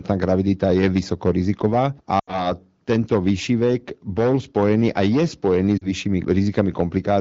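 At 2.19 s the speech quickly fades to near silence and stays out until about 2.52 s, then returns briefly weak. A shorter dip follows from 5.78 to 5.88 s. These are lost AMR speech frames: about 80 ms, then about 40 ms, failed their checks, so the wideband decoder repeated its last good pitch and vocal-tract settings at falling gain. That fits four and two 20 ms frames respectively.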